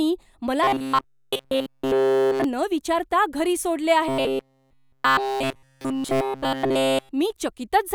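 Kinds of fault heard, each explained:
Robotic sound from repeated short buffers: from 0.64 to 2.44 s, and again from 4.08 s (just after "विचारता घरी सोडले") to 7.11 s, the speech turns into a rigid metallic buzz at 133 Hz. It is likely caused by audio arriving too slowly, with a snippet of about 7.5 ms looped to fill the gaps. A spectrogram shows fixed, evenly spaced harmonics of 133 Hz. The waveform shows one short cycle repeating almost unchanged.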